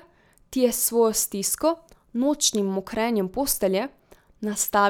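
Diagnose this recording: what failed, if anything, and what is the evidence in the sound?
Nothing in this speech recording points to a failure at any stage of the chain. No event in the sound calls for a diagnosis.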